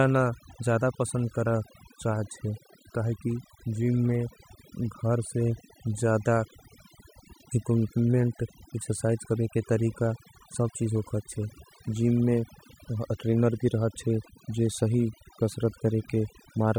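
Overdone noise removal runs through the whole speech clip. A noise reduction stage was set far too strong. Wherever a frequency band sits close to its noise estimate, it pulls that band down hard or shuts it off. Quiet parts of the voice fall below that line and vanish with the noise. The gaps between phrases drop away and break up into twinkling specks.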